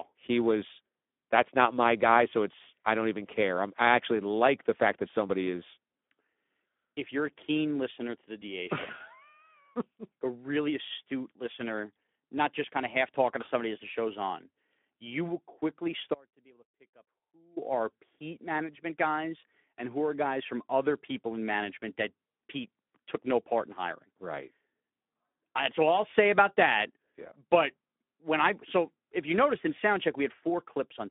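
A speech recording that sounds hoarse and grainy from start to finish, confined to a narrow telephone band of about 200 Hz to 3.5 kHz. This is Speex codec damage. At a rate that fits about 11 kbps, this CELP coder has too few bits to model the excitation, so the voice turns rough and noisy. Just after "keen listener to the", from 8.40 to 8.43 s, the sound briefly smears into a stretched, fading blur. That is VoIP packet loss concealed by the speech codec. The gap fits one lost 20 ms frame, which the decoder filled by repeating its last pitch and filter at falling gain, and the voice takes a moment to recover. After "on you will quickly", from 16.14 to 17.57 s, the sound cuts out abruptly for about 1.4 s, leaving only a faint trace some 30 dB below normal. This is an audio dropout to a faint residue, likely caused by the wanted signal being lost while the path after the break stayed live.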